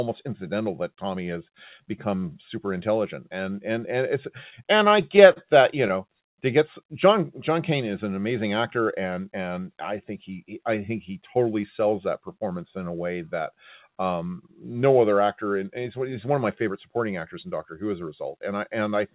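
Speech heard through a call path whose band stops at 4 kHz, which fits G.711 mu-law telephone coding. From 4.50 to 5.38 s, between "and and and it's" and "that you", there is a stutter from repeated stalls: six brief holds, the longest 44 ms and about 99 ms in total, with nothing lost. Late packets repeatedly drained the jitter buffer, and the receiver stretched the last sound each time. At 6.28 to 6.38 s, just before "to get", a short stall from a late packet holds the sound for 80 ms before playback resumes at the same point. From 9.03 to 9.31 s, between "is an amazing actor" and "and I think he", a jitter buffer speed-up trims roughly 50 ms of pitch periods to reduce the backlog, so the speech runs at about 113% speed with unchanged pitch and sounds hurried.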